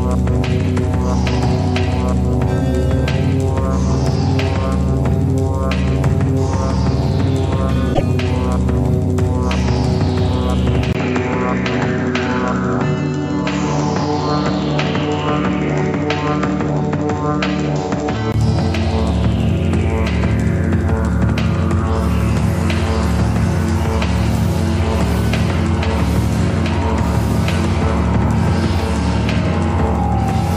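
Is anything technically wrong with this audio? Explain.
Yes, there are two problems. At 7.90 to 8.01 s there's damaged data in the compressed stream: the decoder hits bytes it can't read, loses sync and hunts for the next frame header, so you get a short, roughly 0.1 s glitch.

From 10.93 to 18.34 s the sound goes duller, with nothing above 7.6 kHz, after a 20 ms dropout, and a new noise floor sits around 30 dB down while the level stays about the same. That's likely the input switched to a poorer device, until the full band returns.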